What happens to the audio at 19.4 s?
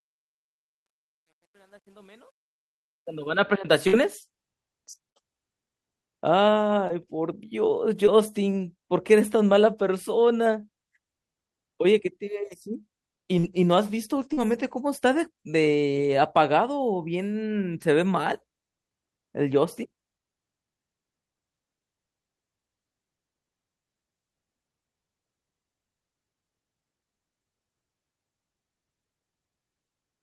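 At 19.4 s the speech carries on intact, with no dropout, click, distortion or other fault at that moment.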